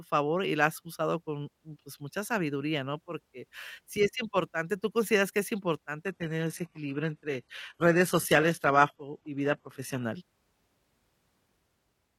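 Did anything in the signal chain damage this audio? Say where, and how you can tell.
Yes, at the network stage: an adaptive stream at a lower bitrate from 6.04 to 10.04 s. The speech abruptly loses everything above 12.3 kHz, with no gap, which points to a switch down to a low-rate HE-AAC rendition while throughput dipped.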